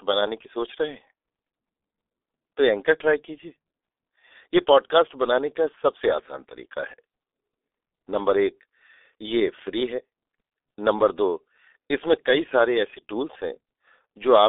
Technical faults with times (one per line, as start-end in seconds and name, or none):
0.00-14.49 G.723.1 codec